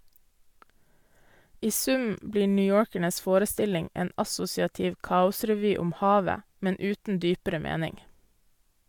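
A short recording of speech, with no technical fault anywhere in it. There is nothing here that needs a time or a cause.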